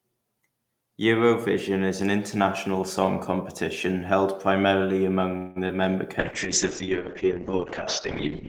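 At 5.37 s the speech stops moving forward. For about 185 ms, until 5.58 s, the last sound is stretched into a fading buzzy continuation with no true silence. When the speech resumes, it picks up where it left off, so nothing is lost but everything after is about 185 ms later. This is a call audio freeze. The likely cause is packets held up in transit, leaving the jitter buffer empty while the receiver padded the wait.

Between 5.68 and 5.71 s there is a brief smear, a small wobble rather than a clean stretch of speech. This is short concealed packet loss. About 20 ms of audio never reached the decoder in time, and the receiver bridged the hole with roughly 11 ms of synthesised continuation before blending back into the real signal.

From 6.21 s to the end, the speech turns muffled and rough, with a watery coarseness to the texture. This is a call bitrate drop. The encoder was pushed from 32 kbps down to 6 kbps and held there for the last 2.28 s. 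At that rate Opus quantises far more crudely and narrows the audio bandwidth from 20 kHz to 8 kHz, removing the upper detail that gives speech its crispness.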